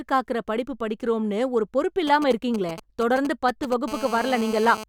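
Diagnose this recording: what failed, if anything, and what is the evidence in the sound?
The analogue wiring failed. From 2.07 s to 3.74 s, GSM signalling bursts ride over the speech. They form a galloping dit-dit-dit of short buzzes at a 217 Hz burst rate, roughly 10 dB below the speech. A 2G phone near the cables is exchanging signalling with its network. Unshielded wiring or an input stage picks up the radio pulses, and a junction rectifies them into audible clicks.

The same analogue path then picks up a GSM phone buzz from 3.88 s to 4.84 s. This time the buzz is steady, hard and raspy. It repeats at 217 Hz and carries many harmonics. It sits about 12 dB below the speech and has no relation to it. The steadiness points to the phone being in an active call, sending a burst every frame. The wiring demodulates that burst train into a continuous buzz.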